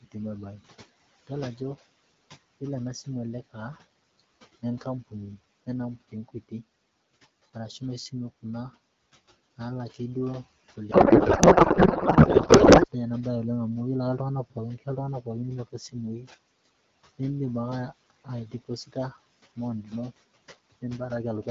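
Noise suppressor artifacts run through the whole recording. The suppressor treats the steady room noise as something to remove and pulls it down by about 19 dB in the gaps, then lets it back up under the speech. The leftover background flutters and warbles, and the voice takes on a thin, watery edge. On a spectrogram, the noise floor between phrases looks patchy and dark, with isolated flickering specks of residual energy instead of an even haze.

Speech cut by the noise suppressor first appears between 3.5 and 5.13 s and again between 5.66 and 6.52 s. Here the suppressor mistook quiet parts of the speech for noise and turned them down with the background, by about 19 dB and about 18 dB at the deepest points. Only brief stretches are affected, a fifth of a second or so in the first span and about a tenth in the second. Soft consonants and word endings sound swallowed. In the waveform these show as sudden dips in the envelope at syllable tails.

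A codec payload misread occupies 10.91 to 12.87 s. The sound points to octet-aligned AMR being unpacked as if it were bandwidth-efficient. The decoder therefore reads every field from the wrong bit position and produces plausible-looking frames of nonsense. For those two seconds the speech gives way to garbled noise and warble that barely tracks it. The spectrogram shows smeared, structureless energy with no harmonic striations.

Speech cut by the noise suppressor returns between 14.5 and 17.2 s and between 18.1 and 20.12 s. The deepest drops are about 20 dB and about 21 dB, and the affected portions add up to roughly half a second and under half a second respectively. Faint phrase endings and low-level consonants fade out together with the room noise, so the speech sounds clipped at the tails.

The room noise itself sits about 15 dB below the speech. The AMR-WB coding sounds clean, which fits a rate around 12.65 kbit/s.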